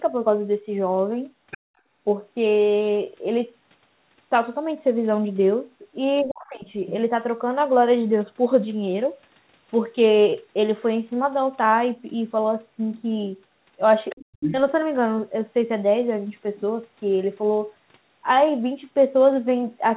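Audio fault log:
1.51–1.58 s, 6.17–6.24 s, 14.09–14.14 s and 14.4–14.54 s, other side's voice leaking through: short scraps of a second voice sit under the talker, about 20 dB down at 1.51 s, about 15 dB down at 6.17 s, about 20 dB down at 14.09 s and about 5 dB down at 14.4 s. This is likely loudspeaker echo left behind by the canceller. A spectrogram shows unrelated harmonic stripes below the 4 kHz ceiling.
6.22–6.67 s and 14.12–14.56 s, speech suppressed in double talk: as echo overlaps, the talker's level sinks by about 30 dB, then about 40 dB, for roughly 0.5 s and 0.4 s. The likely cause is the canceller turning both voices down. The waveform pinches nearly flat, and the spectrogram shows a dark gap.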